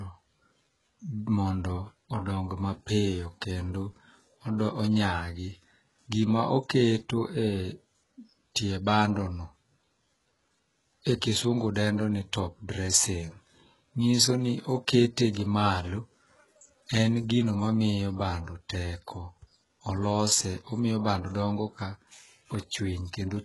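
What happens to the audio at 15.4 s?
Pre-echo runs from 15.33 to 15.37 s, a smear of about 34 ms just ahead of a sharp onset. The codec spreads its quantisation noise across a whole transform block, and because the attack lands late in that block, noise sized for the loud moment leaks into the quiet stretch before it. You hear a brief hiss ahead of the onset, and the attack itself comes across softened and blurred rather than crisp.

Underneath this, heavy HE-AAC compression colours the entire clip, likely from a very low bitrate near 12 kbps. Only the lower spectrum is coded properly; the treble is rebuilt by copying lower bands upward and shaping them with a coarse envelope, so its harmonics don't align with those below. Nothing remains above 11.5 kHz, and the sibilants have a gritty, metallic, lispy edge.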